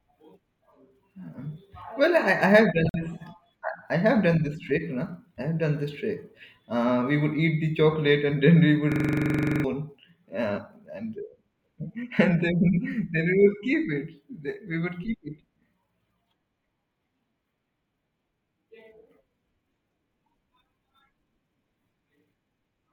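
A speech recording with two faults. From 2.85 to 2.96 s, a corrupt frame decoded produces a short glitch across roughly two damaged frames, peaking around -10 dBFS. On a spectrogram it shows as a brief block of misplaced energy. Right after "chocolate and then we", from 8.92 to 9.64 s, a system hang loop repeats one 42.67 ms slice 17 times, a 23.4 Hz machine-gun stutter that fits a 2048-sample buffer. The waveform shows identical repeating cycles, and about 0.7 s of the speech is lost.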